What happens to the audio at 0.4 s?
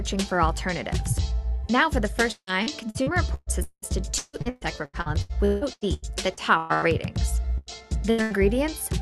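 Nothing goes wrong at 0.4 s: the audio runs intact through the call path there, with no dropout, glitch or distortion at that moment.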